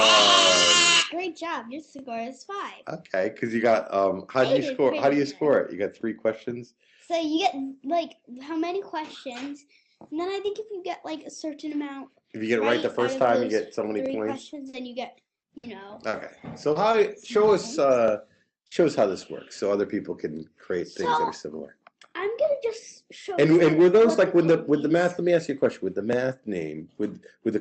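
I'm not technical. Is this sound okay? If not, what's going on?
No. Brief clicks or stutters at 1.99, 6.01, 14.06, 18.08 and 26.13 s are overlapping chunks: the audio was handled in 4-second pieces, and each join replays about 23 ms.

From 14.41 to 17.47 s the sound turns choppy and robotic. This is repeated packet loss: seven small dropouts, the longest 60 ms, were patched by stretching the previous sound.

Around 18.63 to 18.73 s there is a quick smear or wobble. This is short concealed packet loss: two tiny bits went missing and were filled in by guesswork.

At 18.71 and 18.75 s the sound turns briefly rougher and hissier. Each is a lost packet rebuilt from error correction: a lower-quality backup copy filled the hole.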